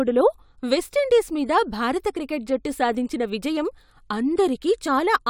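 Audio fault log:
No faults are heard in this speech clip. Nothing in the audio needs to be flagged or timed.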